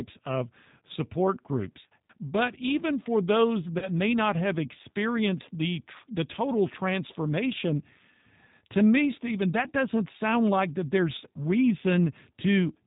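From the start the speech carries G.729 codec coloration, consistent with the 8 kbit/s G.729A variant. Each 10 ms frame is rebuilt from a vocal tract filter, pitch predictor and sparse pulses, so nothing above 4 kHz survives and the voice sounds plainly rough and synthetic.

At 3.79 s about 30 ms of audio goes missing, which fits one lost packet. This is VoIP packet loss concealed by the speech codec. The decoder extends its last pitch and filter with falling gain, giving a brief, fading smear until about 3.88 s, when the predictor state recovers.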